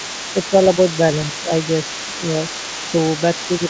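From 0.0 to 3.7 s, a second voice sits under the speech the whole time. This is the other side's voice leaking through. It runs at roughly 15 dB below the main talker. It sounds faint, like a distant call on a speaker. The likely cause is a loudspeaker on the talker's device feeding back into the microphone, with the echo canceller leaving a residue it should have removed.

Between 0.33 and 0.78 s, the speech is suppressed in double talk. The talker's level sinks by around 5 dB in short patches, adding up to roughly a seventh of a second. It happens again from 1.43 to 1.51 s, a brief dip of similar depth. Both sides are talking at once here. The echo canceller likely mistook the talker for echo and turned everything down. The voice briefly thins and pulls back. Throughout, nothing is heard above 8 kHz, which fits a wideband call codec such as G.722.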